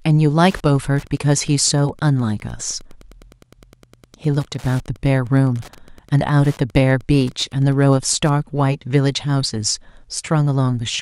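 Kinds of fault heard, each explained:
Wi-Fi interference: a nearby Wi-Fi radio's beacon bursts are rectified in the audio circuit, giving a steady tick every 102.4 ms, about ten a second, from 0.41 to 8.34 s, well below the speech. That regular ticking rate separates it from mains hum or random clicks.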